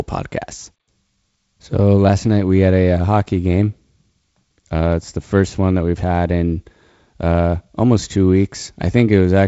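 No faults found in the speech; its G.722 wideband telephone coding at 48 kbit/s leaves the audio band-limited to about 7.7 kHz, with the light added noise expected at that rate.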